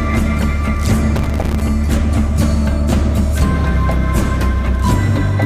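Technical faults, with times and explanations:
1.16 to 1.62 s, processor overload crackle: for about half a second the audio breaks into a gritty crackle, then clears up. What's going on is the processor falling behind and missing buffer deadlines over and over. Each miss drops out as a short silent hole with hard edges. The spacing suggests buffers of around 5 ms, and there are something like forty of those gaps, which blur together into the tearing texture on top of the sound.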